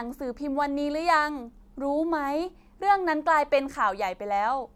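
No technical faults are audible anywhere in the speech recording.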